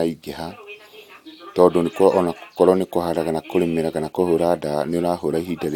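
Nothing stood out on listening to this speech recording.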